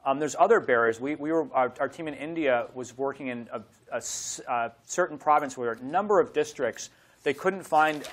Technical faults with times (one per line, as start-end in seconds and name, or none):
none